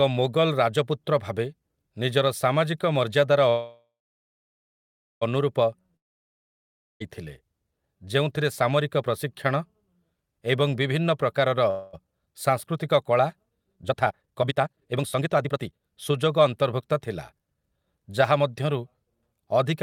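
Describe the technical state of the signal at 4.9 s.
At 4.9 s you're inside a call audio freeze (3.49 to 5.23 s, after "ଭାବେ ନିଜର ସାମାଜିକ ମର୍ଯ୍ୟାଦାର"). The buzz or hiss fades to about 1.3 s of silence, likely because delayed packets drained the jitter buffer. Speech then resumes where it stopped, nothing lost.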